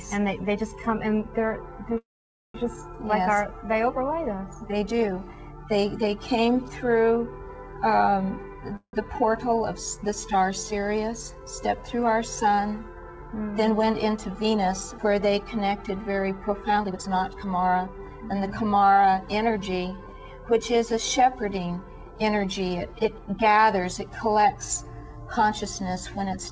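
At 1.98 to 2.56 s and again at 8.76 to 8.95 s the audio stalls in a call audio freeze: a brief fading buzz, then silence for about 510 ms and 80 ms, before resuming where it stopped. This is likely packets held up until the jitter buffer ran dry. On a spectrogram each freeze shows as a smeared, decaying band and then an empty gap.

From 13.15 to 15.06 s, and more noticeably from 16.74 to 17.87 s, a jitter buffer speed-up trims short pitch-period slices to shed excess delay. The sound runs 107% and then 135% fast at unchanged pitch, dropping roughly a seventh of a second and then about 0.4 s. The waveform looks compressed in time, and the second stretch sounds clearly hurried. Throughout, the G.722 call path leaves nothing above 8 kHz.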